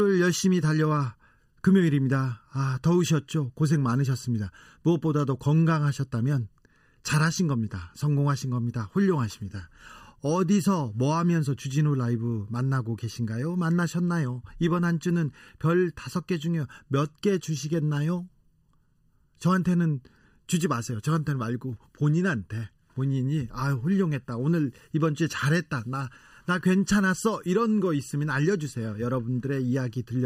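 Channel delay (comb filtering) runs through the whole speech clip, from start to end. One channel arrives a fraction of a millisecond after the other, and when the two are summed to mono, whatever they share cancels at evenly spaced frequencies. The first notch falls around 700 Hz, with further dips near 2.1 kHz, 3.5 kHz and upward. The result is a hollow, phasey tone that stays fixed for the full length.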